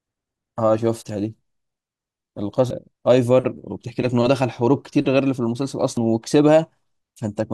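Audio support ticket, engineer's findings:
Damaged data in a compressed stream, speech track: brief glitches at 2.70 s and 5.97–6.00 s. Decoder misreads corrupted frames and loses sync until the next frame header. Spectrogram shows a thin broadband smear; the waveform shows a jagged discontinuity.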